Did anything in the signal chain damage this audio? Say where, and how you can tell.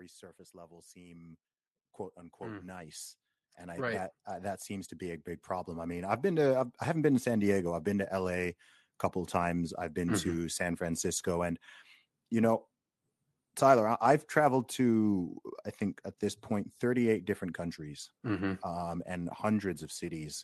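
Yes. Automatic gain rising, in call processing. Voice and background swell together by about 4, 6 and 9 dB at 0.51–1.43, 2.37–4.14 and 4.67–7.17 s. The gain control keeps lifting a quiet input.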